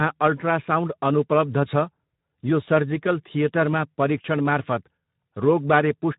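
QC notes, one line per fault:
Throughout: Speex codec. The speech has that grainy, hoarse CELP sound, with plainly audible damage across the whole clip, the kind you get when the excitation is starved of bits at a low setting. The damage level points to something around 11 kbps. The top end stops at about 3.8 kHz with nothing above it, so the speech comes across muffled and phone-like as well as rough.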